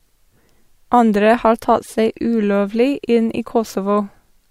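No technical faults can be heard in this recording.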